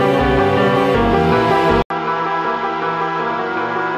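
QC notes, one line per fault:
1.82 to 3.97 s, input switched to a poorer device: 80 ms gap, then duller sound topping out at 7.1 kHz, a bit quieter, faint new background noise; likely a narrower-band mic took over.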